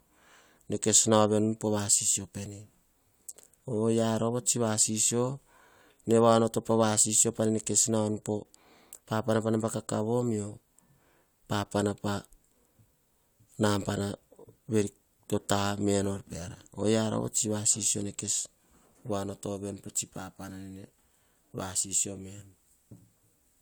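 No technical faults can be heard at any point in the speech recording. There is nothing to mark on the timeline.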